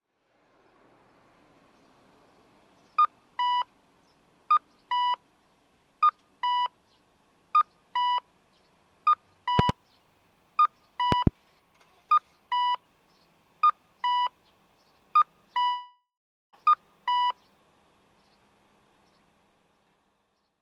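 At 9.59 to 9.72 s and again at 11.12 to 11.29 s comes a loud pop, each a pair of sharp thumps about 20 dB above the sound, likely from a voltage pulse such as a plug or switch. The audio keeps running underneath, which separates it from a gap.

From 15.63 to 16.55 s a long network dropout, likely lost packets, removes about 0.9 s. The last sound is stretched into a fading buzz, then roughly half a second of silence, and the audio resumes further on with that stretch missing, unlike a pop, which adds sound.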